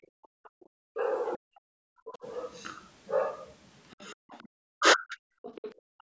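From 0 to 0.61 s the room background sinks by about 40 dB, a near-silent dip lasting roughly half a second before the ambience returns. This is background gated by the echo canceller: while the loudspeaker was active, it clamped the microphone hard.

Overlapping that, from 0.02 to 1.37 s, a faint second voice sits around 30 dB below the main speech. This is the other side's voice leaking through, likely because the echo canceller did not fully remove the far-end loudspeaker signal picked up by the microphone.

From 0.93 to 2.25 s the main talker's speech dips and breaks up, falling by something like 40 dB in places, for around a second in total. This is speech suppressed in double talk. With both sides talking at once, the canceller likely could not separate the near talker from the loudspeaker echo and turned everything down.

The leaking far-end voice returns from 3.91 to 4.48 s, again roughly 30 dB under the speech. 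From 4.13 s to the end of the clip the near speech is once more pushed down in pieces by up to around 40 dB. Within that stretch, from 5.42 to 5.75 s, the leaked voice is stronger, only about 20 dB below the talker. The audio's content stops near 8 kHz, consistent with normal call microphone processing.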